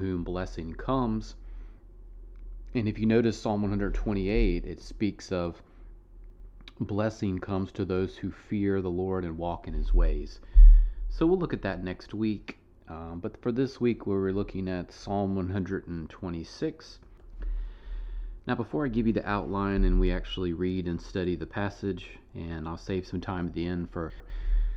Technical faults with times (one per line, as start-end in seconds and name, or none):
6.30-6.50 chunks out of order
24.10-24.30 chunks out of order